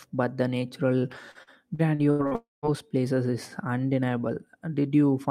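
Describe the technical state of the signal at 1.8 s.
At 1.8 s the signal is inside a stretch of repeated packet loss (robotic sound), running from 1.31 to 2.34 s, just after "but the natural". Audio drops out six times in about one second. Each hole is filled by extending the last good sound. The longest gap is 82 ms, and about 27% of the span is patched this way. The result is choppy, with pieces missing.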